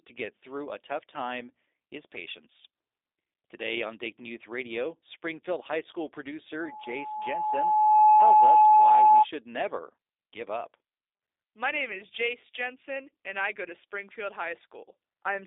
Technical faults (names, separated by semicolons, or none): G.729 codec; loudspeaker feedback squeal